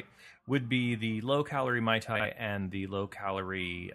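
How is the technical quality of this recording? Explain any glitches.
The recording has one glitch. Frames out of order occur from 2.15 to 2.26 s, just before "and the". Two neighbouring runs of coded audio, each about 46 ms and consistent with two frames apiece, were decoded in swapped order. That stretch plays with its halves exchanged, giving a brief garbled flutter with no time lost.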